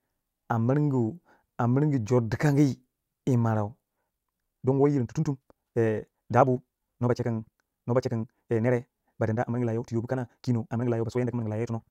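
At 3.94 s the pace suddenly jumps and stays fast to the end. This is a time-stretched section running at 1.98 times speed. The pitch does not rise. The speech turns rushed. Software likely squeezed it by dropping short pieces.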